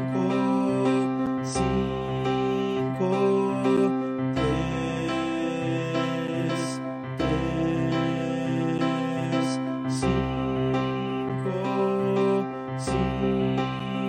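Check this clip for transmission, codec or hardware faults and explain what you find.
The clip has one fault: a gap between chunks, repeating six times. Short holes appear at 1.26, 3.77, 6.27, 8.78, 11.29 and 13.80 s, each about 7 ms long. They fall every 2.5 s, which points to audio delivered in 2.5 s chunks. At each join, a little silence is inserted before the next chunk starts. Nothing is lost, but the sound stops abruptly. Each gap is heard as a brief, hard-edged dropout at a steady rhythm.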